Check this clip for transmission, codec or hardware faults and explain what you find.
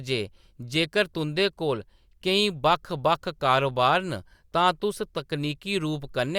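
Nothing stands out here: the speech holds together steadily all the way, with no faults to point to.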